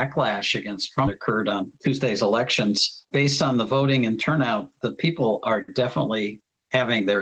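Right around 1.07 to 1.09 s there's a skip ahead: playback just jumps forward with no gap filler, and roughly 0.7 s of sound is gone. What happened is that later audio was already queued up, so that stretch got dropped and the two sides of the cut are butted straight together. That's why it sounds like a sudden splice rather than a dropout.

Then there are two stretches of jitter buffer speed-up. From 1.39 to 4.68 s the sound runs about 5% fast, and from 6.33 to 7.15 s it's pushed harder, about 9% fast. The buffer was holding more audio than it wanted, so it kept snipping out tiny pitch-period-sized slices to catch up. In total that's somewhere around 0.15 s in the first stretch and around a tenth in the second. Pitch stays put, but the pacing feels rushed, more noticeably in that last bit. All of this rides on an Opus call path topping out at 12 kHz, with the coding grain you'd expect from something around 20 kbps.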